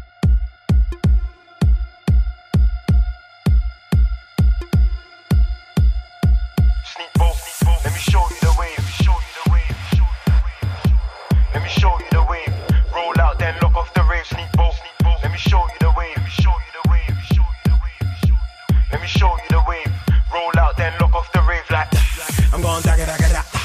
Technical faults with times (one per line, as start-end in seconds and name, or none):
none